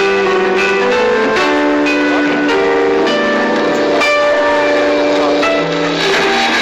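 No faults detected across the clip; levels, timing and signal path all hold steady throughout.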